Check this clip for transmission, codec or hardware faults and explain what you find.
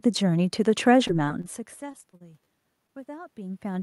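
Three kinds of transmission fault are present: two stretches of repeated packet loss, one short stall from a late packet, and a gain control ramp at the end.

Repeated packet loss (robotic sound), 1.07 to 1.46 s and again 1.92 to 2.48 s. Packets kept failing to arrive in time, and the receiver bridged each hole by extending the preceding sound. In both stretches this happens five times in quick succession. The first stretch has about 86 ms patched over and 60 ms lost outright, with the longest gap 29 ms. The second has about 99 ms patched and 120 ms lost, with the longest gap 34 ms. The speech turns choppy, with pieces dropping out.

Short stall from a late packet, 2.87 to 2.91 s. One packet came about 19 ms late, so the jitter buffer emptied. The receiver held the last sound for those 19 ms, then resumed exactly where it left off. Nothing of the speech is lost. What you hear is a brief unnatural sustain, a momentary hang with a faint buzzy quality, before the audio carries on.

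Automatic gain rising, from 3.06 s to the end of the clip. The input level fell by about 24 dB, and the automatic gain control responded by gradually turning its gain back up. Because the boost is applied to the whole signal, the speech and the room noise beneath it swell together over the final three-quarters of a second. This is a slow upward drift in loudness, not a sudden jump.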